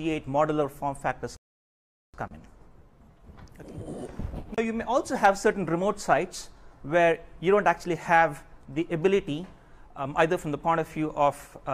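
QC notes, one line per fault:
1.36 to 2.14 s, playback stall: the player was likely starved of data or had its output thread blocked, so nothing reached the output for about 0.77 s. The sound cuts off in mid-flow and drops to complete silence rather than fading, because the output simply stops being fed. When data arrives again the sound restarts abruptly, making a clear hole in the middle of the sound instead of a smooth pause.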